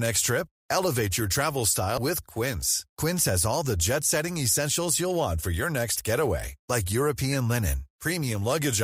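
Compressed frames skipped at 1.98 s, right after "your travel": whole frames of the encoded speech were lost or rejected by the decoder, so playback jumps ahead by about a tenth of a second.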